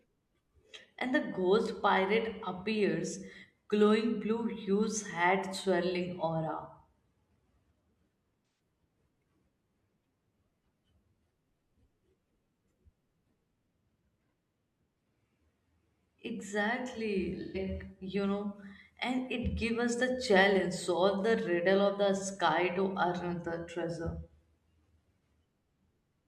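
A brief smeared, noisy and phasey patch interrupts the speech from 8.47 to 8.59 s, and a second, similar one comes from 17.41 to 17.58 s. Both are AAC frame loss with concealment. Compressed frames went missing, which fits about four frames and then three, and the decoder filled each gap by reusing the last good spectrum with randomised detail. That stand-in is why the sound turns briefly blurred rather than dropping out.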